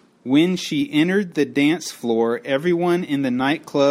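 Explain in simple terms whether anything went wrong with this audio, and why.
Something did go wrong, and it lasts the whole clip. The fault is imaging from linear upsampling. The audio sounds as if it was stored at a lower quality, about 24,000 samples a second, then raised to a normal rate by joining the dots with straight lines. That crude method dulls the top end. It also leaves faint mirror copies of the sound between 12 kHz and 24 kHz. You may hear them as a slight metallic shimmer on hissy sounds in the speech.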